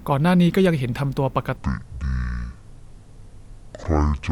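At 1.57 s the speech suddenly drops and drags, becoming deep, slurred and drawn out, and stays that way until the clip ends at 4.32 s. This is a section at the wrong speed: from that point the audio plays at 0.521 times its recorded rate, a little over half speed, so pitch falls by about ten semitones along with the tempo. The likely cause is that this stretch was played or edited against the wrong clock.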